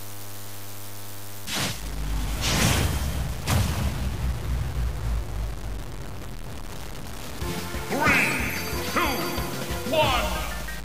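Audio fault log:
throughout: DECT cordless phone buzz. A steady, thin 100 Hz buzz rich in harmonics sits about 30 dB below the sound, from 10 ms radio bursts rectified by the audio circuitry.
throughout: low bit depth without dither. Grainy distortion about 15 dB below the sound tracks it and gets grittier in quiet parts, likely from truncation to about 5 bits.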